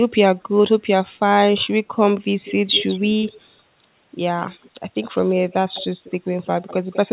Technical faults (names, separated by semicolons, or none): echo leak